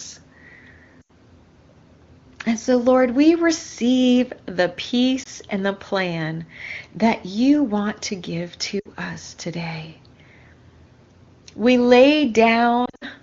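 Speech over AMR wideband (HD Voice), clear at what sounds like a high bitrate, with lost AMR speech frames. At 1.01 to 1.11 s, 80 ms of audio drops out. After "we receive the", a 20 ms gap sits at 5.23 s. Before "us today", 60 ms drops out at 8.79 to 8.88 s. From 12.85 to 13.05 s, 120 ms is lost in scattered bursts. Radio errors corrupted the frames, and the decoder concealed each gap by reusing old settings at falling gain.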